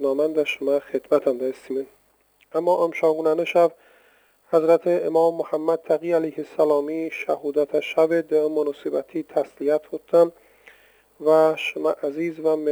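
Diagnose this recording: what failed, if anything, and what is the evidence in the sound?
Crude rate conversion runs through the whole recording, a fault at the sample-rate conversion stage. A gritty, inharmonic fizz sits under the sound, rising with loud and bright passages and holding roughly 30 dB below the signal. The conversion repeats or skips whole samples instead of filtering, so the timing error recurs in a fixed pattern and creates tones unrelated to the material. The pattern fits a step from 44.1 kHz to 48 kHz.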